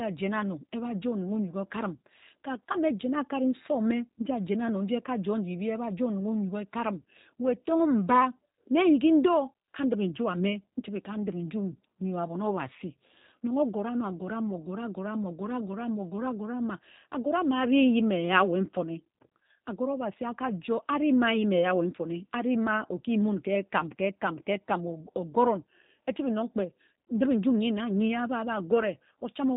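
From start to finish the speech has gone through a G.729 codec, and the damage is plainly audible. Nothing gets through above about 3.8 kHz, so it's boxed into that narrow telephone band. Since the codec rebuilds each short frame from a vocal-tract model, a pitch predictor and a handful of pulses rather than sending the actual waveform, the voice comes out a bit rough and synthetic, which fits a low rate around 8 kbit/s.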